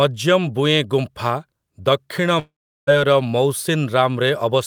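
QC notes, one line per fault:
2.39–2.89 s, long network dropout: speech smears into a fading buzz, then 0.36 s of silence, and resumes with about 0.48 s missing, likely from lost packets.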